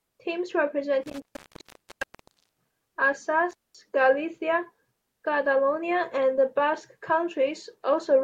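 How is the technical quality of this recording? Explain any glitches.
The speech is broken twice by an intermittent contact fault. The first dropout runs from 1.03 to 2.73 s, with the line open for about 1.35 s. The second, shorter one runs from 3.51 to 3.75 s and is open for about 0.21 s. A loose cable or plug briefly loses connection, so the signal vanishes. Crackle marks each break and reconnection. Faint hiss remains while the contact is open.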